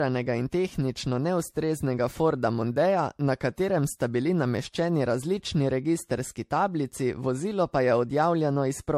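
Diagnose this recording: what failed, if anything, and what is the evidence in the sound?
Codec stage: generation loss runs through the whole speech clip, heard as a swirly, hollow, smeared texture with blurred attacks and no content above 16.1 kHz. This likely comes from about seven successive MP3 encodes near 65 kbit/s, each pass requantising on a shifted frame grid and compounding noise and spectral holes.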